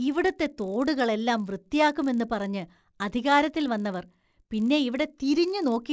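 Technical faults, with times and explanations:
Throughout: resampler restarted on every block. A buzz rides under the speech at 50 Hz. It sounds more like a rough hum than separate ticks. Each 20 ms block was resampled alone, which fits a conversion from 44.1 kHz to 16 kHz. At every block edge the converter lacked the real neighbouring samples. So each boundary carries a small error. Those errors repeat at the block rate. The buzz fades in pauses, since it only appears with signal.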